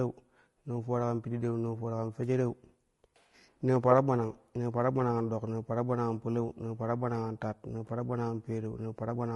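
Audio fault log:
throughout, low-delay AAC compression: the speech sounds rough and grainy, with noisy fuzz between pitch harmonics and a thin, synthetic top band. The likely cause is AAC-ELD coding, whose very short frames blur harmonics and waste bits. The damage fits about 32 kbps.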